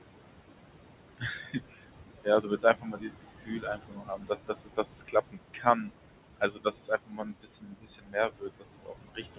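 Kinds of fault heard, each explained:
Noise suppressor artifacts: the suppressor tracks the steady room noise, which sits only about 9 dB below the speech, and pulls it down by about 21 dB frame by frame, so the background drops away between phrases and resurfaces underneath them.
Speech cut by the noise suppressor: with speech so close to the noise floor, the suppressor mistakes parts of it for noise and lowers them by about 20 dB, leaving faint, swallowed stretches at 1.18–1.88 s, 2.24–5.15 s, 5.31–5.91 s and from 6.37 s on.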